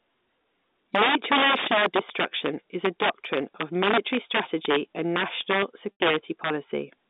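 Integer overflow runs through the whole speech clip. The signal is driven about 8 dB past the top of the integer range. Instead of being held at the limit, every peak that crosses it wraps around to the opposite extreme, so a few percent of samples jump across the full scale. On the loudest syllables this produces harsh, violent cracks, far sharper and more splintered than ordinary clipping. The audio also sits on a telephone line limited to roughly 200 Hz to 3.7 kHz.

Packet loss with pitch repetition comes at 5.93 s, right after "military strategy and national". About 80 ms of audio goes missing, which fits four 20 ms packets dropped in a row. To cover the gap, the receiver keeps replaying the last pitch cycle it had and fades it down. The result is a brief buzzy, frozen tone where the voice should continue, dying away before normal speech resumes through a quick cross-fade around 6.0 s.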